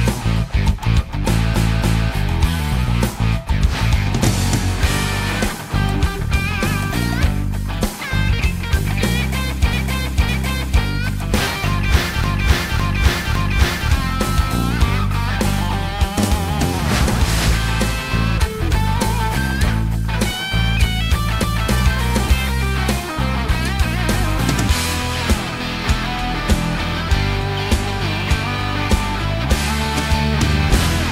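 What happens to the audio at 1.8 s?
That's a repeated-frames glitch, running from about 1.56 to 2.12 s. A roughly 279 ms chunk, which fits a run of about three compressed frames, gets decoded and played twice more, so you hear a stutter, and the clip runs about 557 ms longer.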